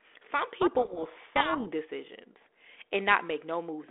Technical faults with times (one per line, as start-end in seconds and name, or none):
0.61-1.73 codec payload misread